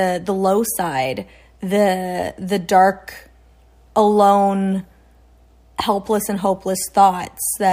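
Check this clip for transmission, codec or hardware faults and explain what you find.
One fault turns up: the resampler restarted on every block, from 5.82 s to the end. The 44.1 kHz to 48 kHz conversion handled each 20 ms block alone, leaving small errors at every edge, so the speech carries a 50 Hz buzz.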